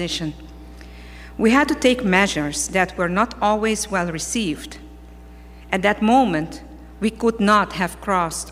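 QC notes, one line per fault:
Throughout, mains hum: a steady low tone at 60 Hz runs under the whole clip, sitting roughly 20 dB below the wanted sound and joined by a few low harmonics that give it a buzzy edge. The power line is leaking into the signal, most plausibly through a ground loop between connected equipment or from a transformer close to the cabling, so the hum stays constant in pitch and level regardless of what else is happening.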